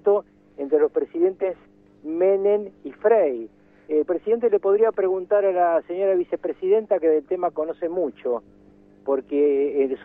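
No technical faults can be heard anywhere in this audio.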